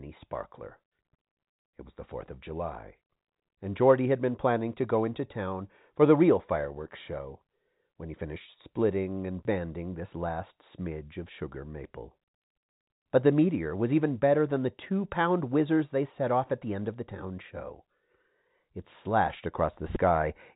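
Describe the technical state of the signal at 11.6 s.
At 11.6 s the speech is intact, carried through G.711 telephone coding that passes nothing above about 3.8 kHz, with no dropout, distortion or other fault at that moment.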